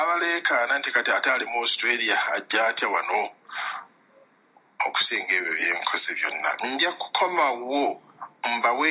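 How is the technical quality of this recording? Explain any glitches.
Nothing to flag: the recording runs steady throughout, with no audible problem at any point.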